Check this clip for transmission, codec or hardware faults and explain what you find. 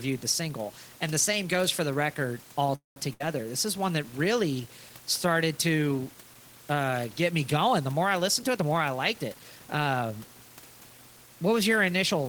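Three transmission faults show up, all in the receiving end of a call path, with steady room noise about 23 dB below the speech throughout.

From 2.75 to 2.97 s the speech stops mid-flow. The last sound carries on briefly and fades, then about 140 ms of silence, and the speech resumes exactly where it left off. This is a call audio freeze, likely from packets held up in transit draining the jitter buffer. About 0.21 s was inserted, adding that much delay.

At 3.13 to 3.21 s the last sound is briefly held and fades, and the speech then jumps ahead. This is a burst of packet loss: about 70 ms of audio never arrived in time, and the receiver stretched the preceding sound across the hole before continuing past it.

Between 8.27 and 10.28 s the speech sounds hurried, running about 10% fast while the pitch stays put. This is a jitter buffer speed-up. With excess audio queued, the receiver repeatedly cut out pitch-period-sized slices, trimming roughly a fifth of a second overall to bring the delay back down.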